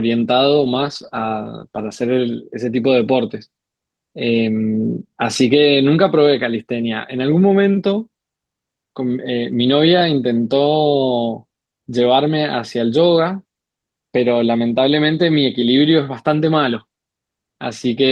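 From 0.57 s to 2.17 s the speech goes through a call bitrate drop. The bandwidth estimate falls, so the encoder has to code the same speech with far fewer bits. The texture turns coarse and watery, and the top end dulls, which fits a fall from about 32 kbps to roughly 14 kbps. The thinnest stretch lasts about 1.5 s. After that the sound recovers to the Opus call path's normal quality, with its band-limit near 12 kHz.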